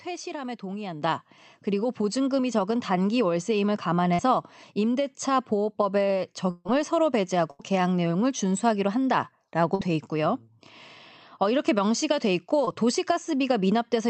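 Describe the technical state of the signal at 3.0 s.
At 3.0 s the speech is intact, with no fault present, only the ordinary coding character of the call path, whose high end stops at around 8 kHz.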